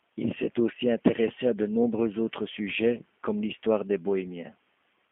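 G.729 codec damage runs through the whole clip: the speech is confined to a 200 Hz to 3.4 kHz line band and rebuilt from a vocal-tract filter, pitch predictor and sparse pulses, which fits an 8 kbit/s G.729A stream, leaving it plainly rough and synthetic.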